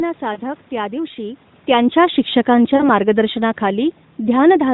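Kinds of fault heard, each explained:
Lost AMR speech frames: Radio errors corrupted speech frames, so the decoder filled the gaps by repeating the last good pitch and vocal-tract settings at decreasing gain. At 0.34 s, just before "त्या दिवशी", a 20 ms gap gives a brief dip. At 2.76 to 2.90 s, a 40 ms loss smears the sound into a short drawn-out warble. On a spectrogram the harmonics flatten into held horizontal lines and fade. The waveform shows a sagging envelope.
Automatic gain falling: The automatic gain control judged the input too loud or its background noise too strong and lowered its gain gradually. From 1.95 s to 4.69 s the level sinks by about 4 dB, and the room background sinks with it because the whole signal is scaled rather than the talker moving. The waveform envelope tapers smoothly across that span. On a spectrogram both the speech energy and the noise floor darken steadily together.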